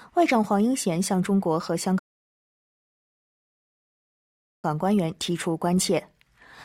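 At 1.99 s the sound drops to silence and stays there until 4.64 s, a rebuffering stall lasting about 2.6 s. Playback ran out of downloaded audio and halted until more data arrived, then picked up exactly where it stopped. That resumption is what separates it from a dropout or packet loss: no material is skipped or replaced, and the gap adds time instead of removing any.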